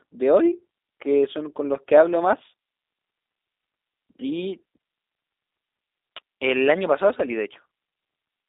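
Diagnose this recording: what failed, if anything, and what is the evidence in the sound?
G.729 codec damage, present throughout the speech: the sound sits in a telephone band of roughly 300 Hz to 3.7 kHz and has a rough, synthetic buzz. That fits an 8 kbit/s coder rebuilding each 10 ms frame from a vocal-tract filter, pitch predictor and sparse pulses.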